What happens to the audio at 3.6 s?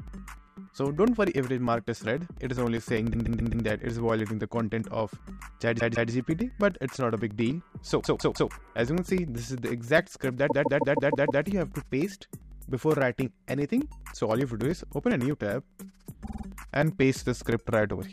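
A run of compressed audio, a block of about 130.6 ms, was delivered more than once between 3.12 and 3.65 s. The decoder replays it four extra times, causing repeated frames: a stutter that adds 0.52 s. Throughout, from 0.08 to 18.02 s, periodic USB or driver dropouts blank roughly 2 ms of audio every 0.1 s, producing steady ticks under the signal.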